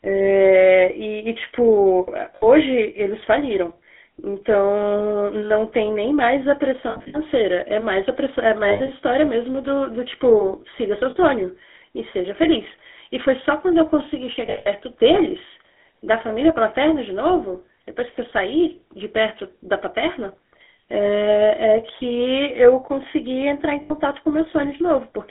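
GSM full-rate codec, throughout the speech: the vocal tract is modelled and driven by a sparse pulse excitation, leaving a plainly audible buzzy, gravelly roughness. The band runs only from 250 Hz to 3.5 kHz, which fits the 13 kbps full-rate coder.

Lost GSM frames at 2.36–2.48 s, 6.90–7.16 s, 8.68–8.90 s, 11.10–11.17 s, 14.46–14.67 s and 23.82–23.92 s: each missing stretch is bridged by repeating the last good frame, so the sound hangs as a rough, metallic ring. The gaps at 2.36 s and 11.10 s last 60 ms, and the one at 23.82 s lasts 80 ms. At 6.90 s the losses total 180 ms scattered over 240 ms, at 8.68 s 120 ms over 200 ms, and at 14.46 s 180 ms over 200 ms, with one run near 150 ms long that rings the longest.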